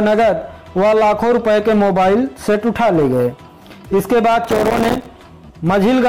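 Processor overload crackle runs from about 4.44 to 5.06 s. Over that stretch the processor falls behind and keeps missing the deadlines for its tiny buffers. The buffers are roughly 3 ms each, and around a hundred of them come up empty. Each miss drops a short slice of silence into the stream with abrupt edges. Strung together, these gaps make a gritty, tearing crackle laid over the sound, which clears once the load eases.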